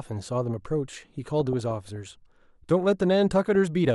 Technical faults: DAB burbling

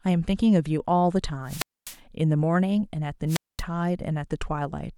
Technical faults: wireless microphone squelch dropout

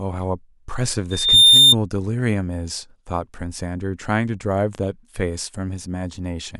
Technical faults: loudspeaker feedback squeal

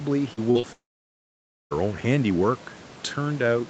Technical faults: short concealed packet loss; long network dropout

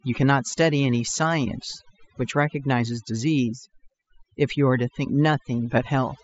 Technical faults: overdone noise removal

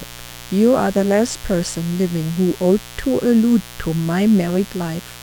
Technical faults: mains buzz

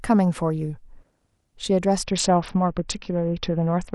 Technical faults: Bluetooth SBC bit pool drop

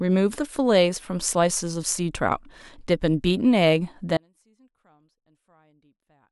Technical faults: audio dropout to a faint residue

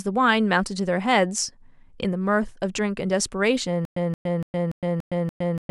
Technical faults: stutter with silent gaps

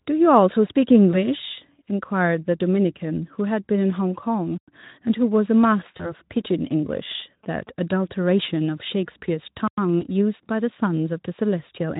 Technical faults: VoIP packet loss concealed by the speech codec; gap between chunks; GSM signalling bursts

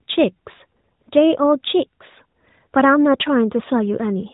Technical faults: none

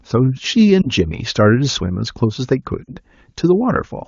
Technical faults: lost AMR speech frames

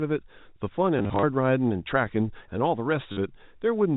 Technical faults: packet loss with last packet repeated

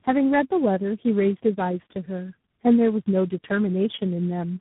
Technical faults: tandem speech coding

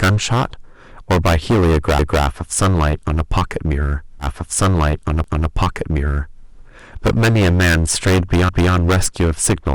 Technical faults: hard clipping; overlapping chunks; stream segment repeated

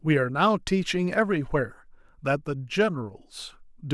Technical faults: none

